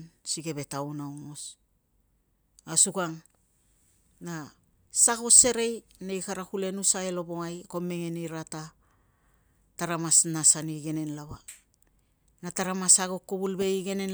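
Nothing in this speech recording stands out as a technical problem; it just runs along without any glitch worth flagging.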